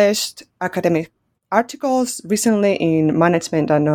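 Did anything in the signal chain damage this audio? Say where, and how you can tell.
Yes. From 2.49 s to the end of the speech clip, the audio turns dull and muffled. This points to de-emphasis applied wrongly: a treble cut meant to undo pre-emphasis that wasn't there. A spectrogram shows the upper bands darkening smoothly, about 11 dB down at 10 kHz relative to 1 kHz.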